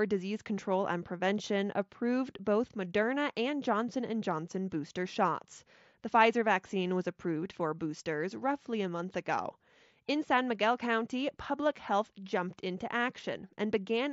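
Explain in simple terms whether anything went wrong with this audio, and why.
Nothing went wrong here: the speech comes through a Bluetooth headset's mSBC codec, which carries sound up to 8 kHz with only the light coding grain expected from that link, and no fault turns up anywhere in the signal.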